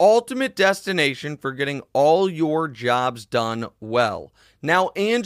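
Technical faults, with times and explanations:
No technical faults can be heard in this speech clip. There is nothing at any point in the recording that calls for a time or an explanation.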